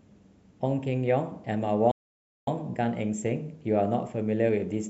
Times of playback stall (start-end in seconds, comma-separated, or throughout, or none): 1.91-2.47